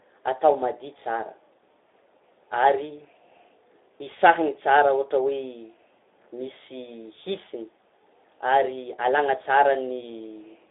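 Speech that sounds noisy and hoarse from start to finish, confined to a narrow band of about 300 Hz to 3.6 kHz with nothing above 3.8 kHz. That is plainly audible Speex codec damage, which fits a low bitrate near 11 kbps.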